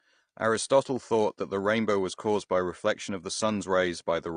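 From start to finish the speech carries AAC compression damage, and it's plainly audible. Nothing comes through above about 9.7 kHz, so everything sounds dull and the sibilants lose their air. There's a smeared, warbly fizz on the sustained parts too. That's the coder running short of bits: it drops the top of the spectrum and quantises what's left coarsely. It's likely AAC-LC at a low bitrate, which fits something around 32 kbps.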